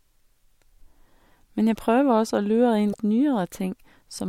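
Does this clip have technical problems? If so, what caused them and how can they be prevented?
Yes. Damaged data in the compressed stream knocked the decoder out of sync from 2.89 to 2.95 s, just after "prøver også å lure," producing a short glitch. Using checksummed, error-protected transport and keeping metadata out of the audio payload prevents this.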